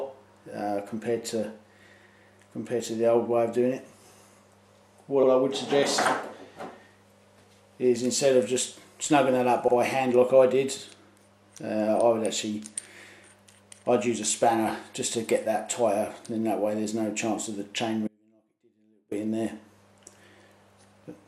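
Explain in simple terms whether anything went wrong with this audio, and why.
Two small stutters are audible, at 5.23 s and 9.68 s. Each is a case of repeated frames. A short block of the compressed audio, about 64 ms, was stored twice, so it plays once more. Each repeat makes the audio 64 ms longer.

From 18.08 s to 19.11 s, the sound suddenly cuts out for about a second. Only a faint trace of it remains, far below its normal level. This is an audio dropout to a faint residue. The likely cause is that the signal was lost while the playback path stayed open.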